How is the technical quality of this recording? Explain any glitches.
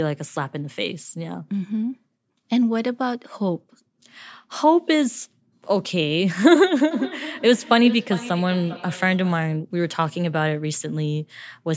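One glitch affects the recording. From 6.91 to 9.53 s there is feedback echo between two devices: a second device in the room replays this microphone's audio, which gets picked up again. Repeats arrive about every 0.4 s, peaking about 14 dB below speech, thinner and ringing each pass. Unlike room reverberation, the repeats are distinct and evenly spaced, not a smooth tail.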